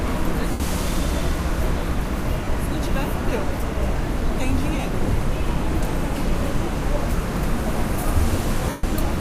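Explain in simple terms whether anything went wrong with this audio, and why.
Lost LE Audio frames: the Bluetooth LE Audio link dropped short runs of data, so the decoder filled each gap by repeating the last stretch of sound with its detail scrambled and fading. The gaps are at 0.51 s (about 90 ms), 2.44 s and 4.80 s (about 30 ms each), and 8.69 s (about 140 ms). Each one sounds like a brief hissy smear, and the longer ones thin out toward silence. The light data compression on the link leaves at most a faint trace.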